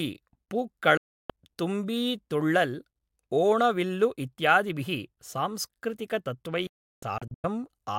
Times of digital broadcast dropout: 0.97-1.30, 6.67-7.44

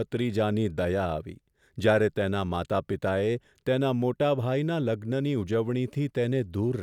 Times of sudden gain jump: none

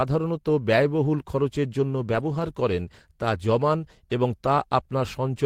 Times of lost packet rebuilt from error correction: 2.11-2.49

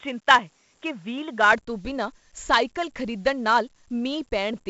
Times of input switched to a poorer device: 0.00-1.53

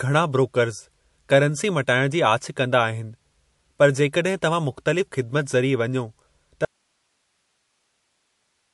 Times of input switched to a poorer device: none

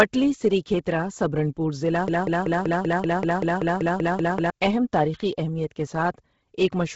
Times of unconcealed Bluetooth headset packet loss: none

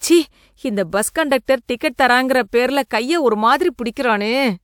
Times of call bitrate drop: none

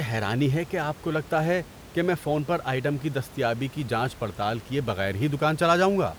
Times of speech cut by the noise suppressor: none

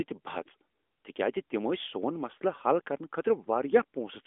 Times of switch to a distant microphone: none

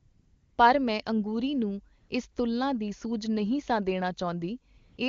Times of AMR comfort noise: 0.00-0.57, 1.99-2.35, 4.77-4.97

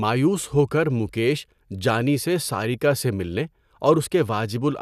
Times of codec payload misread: none

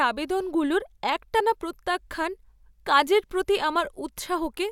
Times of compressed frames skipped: 1.39

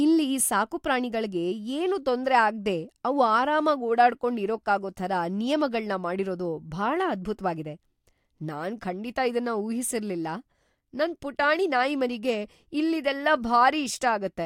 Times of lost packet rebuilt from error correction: none

